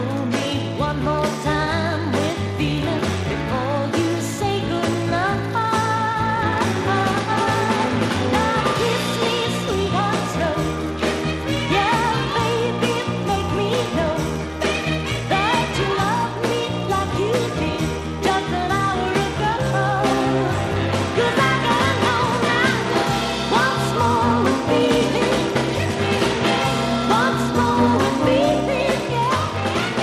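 No technical faults are audible.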